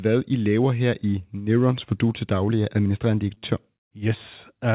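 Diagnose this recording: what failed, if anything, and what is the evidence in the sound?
At the network and jitter-buffer stage, two packets arrived late in a row and the buffer ran dry, producing a short stall from a late packet twice, at 3.34 to 3.38 s and 3.38 to 3.45 s, right after "til daglig er administrerende". The receiver stretched the last speech sound by 20 ms, then 44 ms, before resuming where it left off. Nothing is lost, but that sound is held unnaturally long, with a slight buzz or dip, over the G.711 call's 4 kHz-limited band.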